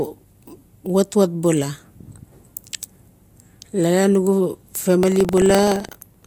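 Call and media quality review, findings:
Buffer tearing, 4.99 s to end of clip. Robotic buzz at 23.4 Hz over the speech. Playback ring buffer write and read cross each period, fitting a 2048-sample buffer. A small slice carries audio about a tenth of a second stale.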